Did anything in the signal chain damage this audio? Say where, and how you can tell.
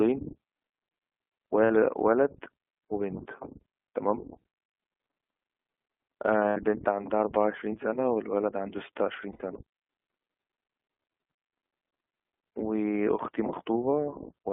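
Yes. The iLBC codec damage runs through the whole speech clip at the codec stage. The band stops sharply at 3.4 kHz with nothing below about 250 Hz, and the voice sounds plainly rough and synthetic. That fits independently coded 20 ms frames at 15.2 kbps.

Lost iLBC frames, at the network stage, occur at 1.64–1.71 s (60 ms) and at 6.48–6.57 s and 9.32–9.43 s (80 ms each). Each gap is a held, buzzy vowel where the decoder looped the last pitch cycle with noise, which fits three or four missing frames. Clean speech returns immediately.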